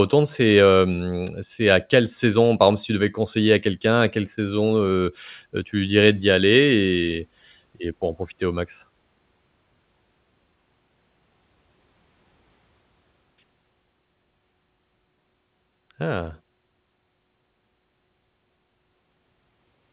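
There are no technical faults to describe in this speech, which arrives through a G.711 mu-law call path with nothing above 4 kHz.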